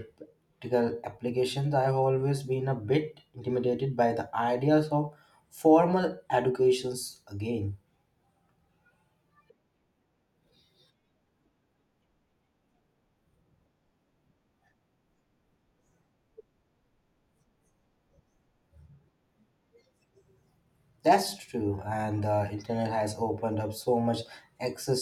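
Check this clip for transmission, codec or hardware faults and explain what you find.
Nothing in the speech here points to a transmission, codec or hardware fault.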